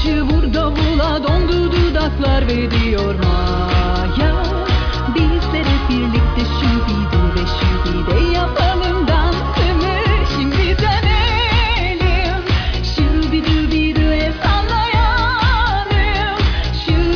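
Listening through the whole recording, nothing stood out as a technical problem at any point.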